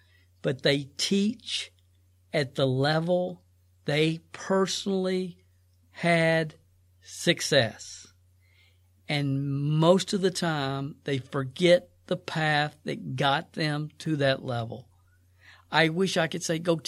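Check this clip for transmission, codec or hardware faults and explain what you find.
One fault stands out near the end. At 14.06 s there is a block of digital silence lasting about 3.6 ms. The sound cuts out abruptly and returns, giving a single tick.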